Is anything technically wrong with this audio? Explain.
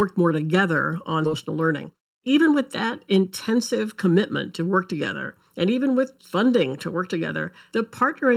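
Yes, there are three faults.

Channel delay (comb filtering) runs through the whole clip. One channel lags the other by about 0.7 ms, and the two are summed to mono. Whatever they share cancels at evenly spaced frequencies, with the first notch around 700 Hz, so the speech sounds hollow and phasey throughout.

A skip ahead occurs at 1.25 to 1.27 s, right after "more together on". About 0.4 s of audio was discarded while later audio was already queued, and playback jumped straight to it with no gap. The two sides are spliced almost directly, so a chunk of speech simply vanishes.

A jitter buffer speed-up runs from 1.49 to 3.31 s. The buffer was holding more audio than its target, so the receiver trimmed many short pitch-period pieces, about a tenth of a second in total. The speech plays about 6% faster at unchanged pitch and sounds hurried.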